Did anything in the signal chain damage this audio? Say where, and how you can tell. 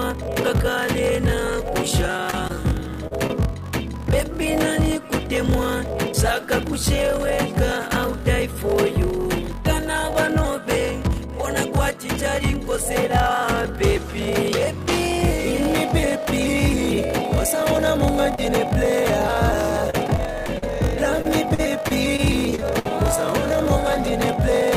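Yes. Two stages damaged it: the driver or buffer stage throughout, and the network during three stretches.

Throughout the clip there is a block size mismatch (padded) at the driver or buffer stage. A steady buzz at 46.9 Hz runs under everything, and the audio plays at 0.861 times normal speed while its pitch stays about right. One stage hands over blocks shorter than the next stage reads, and the remainder of each block is zero-filled. That inserts a short silence every block. The buzz rate points to a 1024-sample read buffer.

Repeated packet loss (robotic sound) appears on the network path from 2.17 to 3.31 s, with five gaps and the longest at 38 ms. It returns from 19.54 to 22.92 s, with fifteen gaps and the longest at 62 ms. Both spans sound choppy, with fragments missing. About a tenth of each span is synthesized. The receiver keeps extending the last sound to cover each hole, then another hole arrives shortly after, so the patches pile up into a mechanical texture.

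There is a short concealed packet loss from 18.35 to 18.40 s, also from the network. It is heard as a brief smear in the sound. About 20 ms of audio never reached the decoder in time. The receiver covered it with roughly 24 ms of continuation built from the preceding sound, then crossfaded back into the real signal. The transition gives a wobble instead of a clean dropout.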